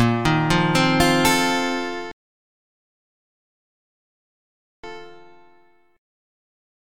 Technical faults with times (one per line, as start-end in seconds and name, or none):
2.11-4.84 rebuffering stall